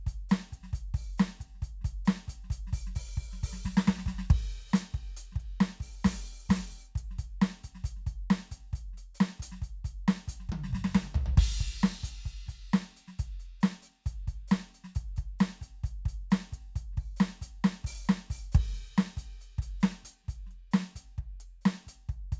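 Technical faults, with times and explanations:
Nothing technical goes wrong anywhere in this music.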